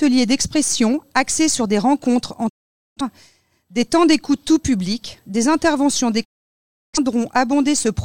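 The receiver twice lost valid frames and muted, a digital broadcast dropout each time. At 2.48 s the sound fades out over 20 ms and stays silent until 3.01 s. It happens again from 6.23 s to 6.99 s. That programme audio is gone.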